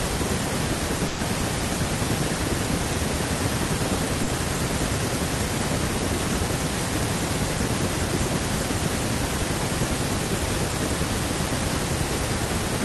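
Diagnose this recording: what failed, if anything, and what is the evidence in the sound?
From 1.07 to 1.21 s the speech stalls into a held, fading continuation of the last sound, then picks up further along. This is a burst of packet loss in the network: about 120 ms never arrived, and the receiver stretched and faded the previous audio across the gap.

Brief smears occur at 4.23 to 4.29 s and at 10.71 to 10.75 s, each a momentary wobble rather than a dropout. These are short concealed packet losses, also network-side. About 40 ms and 20 ms went missing, and the decoder patched each hole by extending the preceding sound before blending back in.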